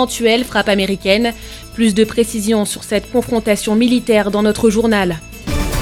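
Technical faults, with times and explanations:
Nothing stood out on listening to this one.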